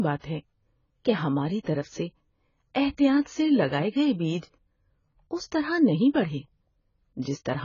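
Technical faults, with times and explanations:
Throughout: AAC compression. The speech sounds dull and smeared, with a fizzy, warbling texture on sustained sounds and sibilants. The likely cause is heavy AAC-LC coding at a very low bitrate, around 16 kbps. The encoder drops detail the hearing model deems least audible and lowers the cut-off. On a spectrogram, nothing appears above 7 kHz, a hard flat ceiling, and the energy below it is patchy, with holes and blotchy filled bands.
1.63–1.67 s, 3.21–3.25 s, 4.38–4.43 s, 7.22–7.25 s: pre-echo. Before each of these four sharp attacks, a short hiss arrives early and blurs the onset. It lasts 39, 42, 50 and 34 ms respectively. Each attack falls late in a transform block, so quantisation noise sized for the loud onset is spread over the quiet moment before it. On a waveform, a low noisy ramp precedes the transient. A spectrogram shows a broadband smear just left of the attack.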